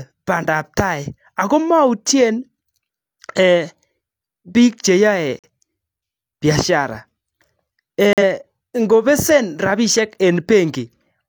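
Speech with three corrupt frames muted in two dropouts, at 5.39 s (about 86 ms) and 8.13 s (about 96 ms). Each dropout begins abruptly as the sound cuts to dead silence and then resumes. This fits compressed frames arriving with flipped bits that the decoder rejected, so the player filled their slots with silence. Because the silence occupies the lost frames' full duration, the surrounding timing stays intact and nothing shifts afterward.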